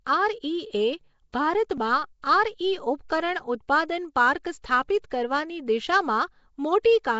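Speech was passed through a low-rate block transform codec, likely Nellymoser compression, with a sound that fits roughly 32 kbps. Nothing survives above 7.7 kHz, and the voice carries a rough, hissy, underwater halo throughout. Because that codec spreads its quantisation noise across each block, sharp onsets get pre-echo, a short hiss of 10 to 16 ms that arrives ahead of the attack and blurs it, at 1.32, 2.22, 3.08, 5.10 and 6.83 s.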